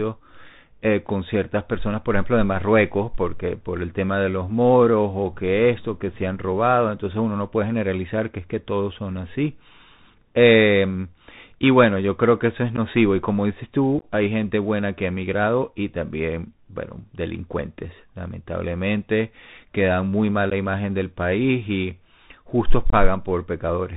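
Throughout, the Bluetooth CVSD headset codec at 64 kbps cuts everything above 4 kHz. Its adapting one-bit steps leave scratchy s sounds, distorted loud peaks, and granular hiss.

Unconcealed Bluetooth headset packet loss leaves silent holes with abrupt edges at 12.77–12.79 s, 13.98–14.05 s, 20.50 s and 22.90–22.94 s. Each gap is 11 to 38 ms, and the speech returns briefly quieter. Around 14.0 s the losses are scattered, which fits roughly ten dropped packets.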